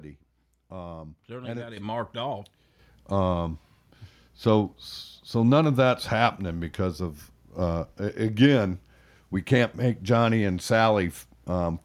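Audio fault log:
1.77 s and 2.79 s, microphone volume stepped up: The whole signal jumps in level twice, by about 8 dB just after "certainly got it" and then by about 5 dB after "it it marked off". Voice and background rise together in a single step each time, because the call software judged the input too quiet and raised the microphone's device gain outright rather than ramping it.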